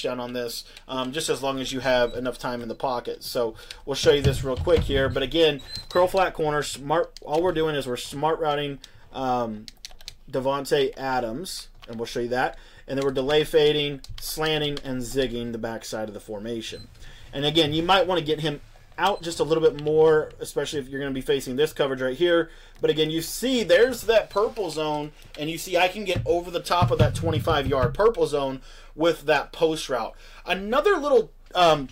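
Nothing goes wrong anywhere in the audio, so there's no fault to point to at any moment.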